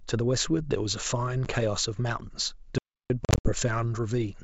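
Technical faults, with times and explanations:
1.45–1.47 s, packet loss on an ADPCM call: a hard-edged hole of about 10 ms, consistent with one lost packet, after which the speech resumes slightly distorted because the decoder's predictor and step size no longer match the sender's, recovering within tens of milliseconds.
2.78–3.10 s, audio dropout to silence: the speech cuts off mid-flow into roughly 318 ms of silence with no room tone, then resumes abruptly. Whatever was said in that span is gone. The likely cause is a briefly lost input or link while recording continued.
3.25–3.52 s, packet loss on an ADPCM call: about 150 ms of gaps scattered over roughly 200 ms, the longest run 60 ms, which points to around fifteen lost packets. Each restart brings some distortion as the adaptive decoder re-converges.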